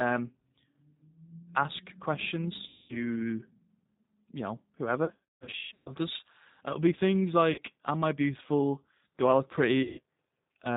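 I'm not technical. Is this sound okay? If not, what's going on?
No. The whole recording went through the G.729 codec, a phone-call compressor that rebuilds speech from a rough model of the voice and discards everything above 4 kHz. That is why the speech sounds muffled, slightly rough and a little artificial throughout.

There is also VoIP packet loss concealed by the speech codec: chunks of the call went missing, and the decoder filled each gap by stretching the last sound into a fading buzz or noise, leaving the voice weak or garbled for a moment afterwards. This happens at 2.68 to 3.18 s, from 5.05 to 5.94 s as a scattered series of dropouts, briefly at 7.52 to 7.62 s, and at 9.83 to 10.0 s.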